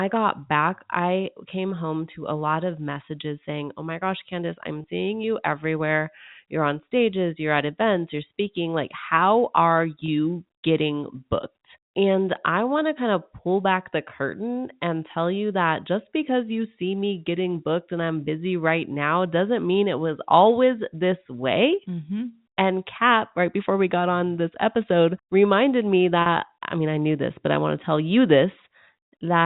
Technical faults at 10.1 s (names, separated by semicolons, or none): packet loss with pitch repetition